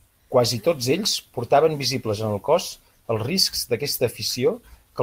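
No technical faults can be heard in this speech recording.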